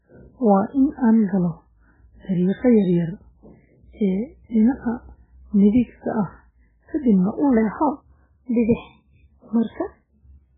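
The clip is speech, and heavy MP3 compression runs through all of it. Nothing is present above 3.8 kHz, so the treble is simply cut off. The sound is watery and swirly, with weak frequency components switching on and off between frames. Attacks smear. The damage points to a very low bitrate, around 8 kbps, where the encoder must discard most detail. From 7.57 s to the end, just after "midigta ah kadibna u", there is a section at the wrong speed. It plays 1.12 times too fast, so the audio turns higher and more hurried together. Pitch rises by about two semitones. The likely cause is a player or editor running this part against the wrong clock.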